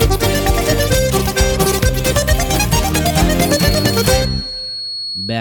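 From 3.41 s to the end, a feedback whistle sits steadily at 4.3 kHz, roughly 10 dB below the sound and swelling and fading slowly in level. The likely cause is a loudspeaker-to-microphone loop held just at the edge of feedback, sustaining one frequency without escalating.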